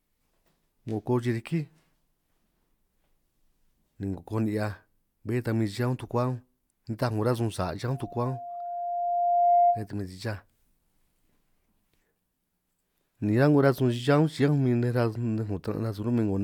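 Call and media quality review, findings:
Loudspeaker feedback squeal, 7.91–9.87 s. Single 700 Hz tone swells over roughly a second and a half, peaking about 5 dB above the speech. Component: open mic near its own loudspeaker. Loop gain above unity at 700 Hz. Tone self-reinforces; squeal ends at 9.87 s. Fix: reduce monitor gain, move or aim the mic away, notch near 700 Hz.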